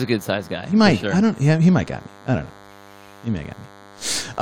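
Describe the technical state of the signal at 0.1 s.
At 0.1 s, as throughout the clip, a nearby DECT transmitter's bursts are being rectified in the audio circuit 100 times a second, producing DECT cordless phone buzz: a steady, thin, harmonic-rich 100 Hz buzz sitting roughly 25 dB below the speech.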